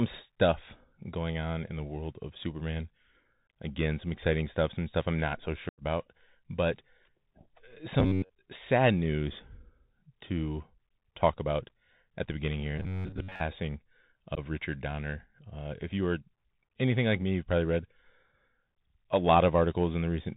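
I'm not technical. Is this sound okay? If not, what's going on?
No, it has problems. The whole recording runs through a Bluetooth CVSD headset codec, the low-quality phone-call mode of Bluetooth headsets. Nothing above 4 kHz gets through, so it sounds narrow and muffled. S sounds turn scratchy, and a grainy hiss sits underneath.

There is also unconcealed Bluetooth headset packet loss. Small chunks of audio never arrived and were replaced by silence. This gives short holes with sudden edges. The first is at 3.49 s. A longer one, about 90 ms, runs from 5.69 to 5.82 s, right after "stuff I'm not so". The last runs from 14.35 to 14.39 s.

Two stretches have a robotic sound from repeated short buffers. The first runs from 8.00 to 8.32 s, between "but uh" and "sad news". The second runs from 12.78 to 13.41 s, after "at the beginning here". Here the speech becomes a stiff, metallic buzz at about 94 Hz. 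The likely cause is software repeating a tiny slice of about 11 ms whenever new audio arrived too late. Most of the real sound in those stretches is lost.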